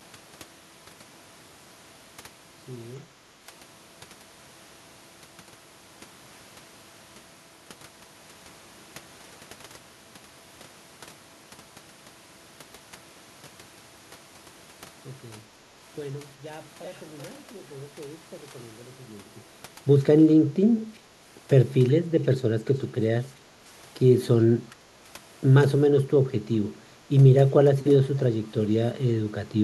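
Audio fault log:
0.94–2.04 s, zipper noise: The level falls by roughly 25 dB here, but it comes down in a staircase of steps, around 40 a second, rather than gliding. Each step makes a tiny click where the waveform jumps, so you get a ticking, zipping texture riding on the speech for just over a second while the gain moves. The fade is doing its job level-wise; the ramp just isn't smoothed between steps.
16.83–16.99 s, echo leak: For about 0.16 s a faint delayed copy of the speech shows up, lagging by 379 ms and sitting roughly 25 dB under the direct voice. It's a short scrap rather than a sustained trail, quiet enough that it sits well behind the talker. The likely cause is a far end on loudspeaker whose echo canceller let some of the playback back into its microphone and returned it down the line.
24.7–24.85 s, background gated by the echo canceller: The room sound dips by about 15 dB for roughly 150 ms, then comes straight back. 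That brief hole in the background is the echo canceller clamping the microphone while it thinks loudspeaker audio is playing, then releasing once it stops. It's short enough to register as a momentary pumping or gap in the ambience rather than a proper dropout.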